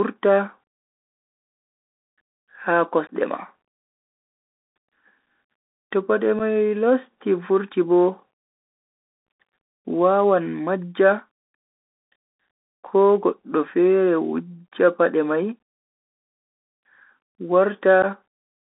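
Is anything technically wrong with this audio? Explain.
Yes, there are two problems.

Bluetooth CVSD headset codec, throughout: the sound is confined to roughly 200 Hz to 3.7 kHz, which fits a 64 kbps CVSD headset link. Its one-bit delta coding can't track sharp, loud detail, so sibilants come out scratchy over an audible granular hiss.

Unconcealed Bluetooth headset packet loss at 3.07 s, 6.39 s (just before "mai losti"), 9.27 s and 18.02 to 18.05 s: a few voice packets went missing each time and nothing filled the gaps. The result is holes of 18.8, 7.5, 15 and 11.2 ms with abrupt edges.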